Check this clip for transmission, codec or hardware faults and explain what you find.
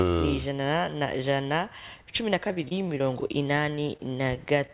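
Two packet-loss faults are audible, carried over a narrowband call path whose sound stops at 4 kHz, which fits G.711 A-law at 64 kbps.

From 2.48 to 3.31 s there is repeated packet loss (robotic sound). About ten holes arrive close together, the longest 30 ms and roughly 120 ms in total. Each is patched by extending the previous sound, so 19% of the stretch is filler. Because the patches follow close together, the audio turns choppy, not just briefly ticking.

From 3.75 to 4.70 s there are scattered short gaps: a handful of holes, none much over 20 ms, with 60 ms missing and only about 7% concealed. They are spaced apart, so each is a brief hiccup or smear with clear audio between, never a continuous robotic texture.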